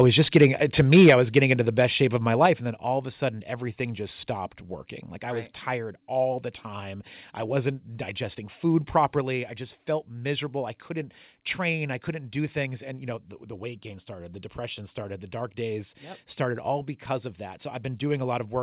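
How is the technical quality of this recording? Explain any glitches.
The speech in this recording has two clipped stretches near the start and four sudden level changes, all heard through a telephone-band channel with no content above 4 kHz, which fits G.711 mu-law at 64 kbps.

Microphone overload occurs from 0.23 to 0.46 s and again from 0.80 to 1.52 s. The peaks push past full scale by about 5 dB and then about 8 dB, with a small fraction of samples flattened in each stretch. The likely cause is input gain set too high ahead of the converter, so the waveform tops are sheared off. On the loudest syllables this produces a harsh, gritty crackle, stronger in the second stretch.

Microphone volume stepped down occurs at 1.10 s, 2.46 s and 9.21 s, by about 4 dB, about 5 dB and about 3 dB. The first cut arrives in the middle of the second overload. The likely cause is the call software's automatic gain control pulling the device input down once it detected clipping or excessive level. 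The speech and the background noise drop together in a single abrupt step, with no gradual fade.

Microphone volume stepped up occurs at 14.19 s by about 1 dB. Here the gain control decided the input had become too quiet and raised the device volume in one increment. Because the change is small, it is heard as a slight, instantaneous lift in both the speech and the noise floor rather than an obvious jump.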